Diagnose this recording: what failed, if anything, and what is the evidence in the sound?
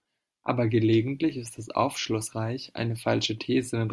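Nothing in the chain audibly failed: the speech signal stays continuous and intact, with its level, timing and tonal balance holding steady throughout.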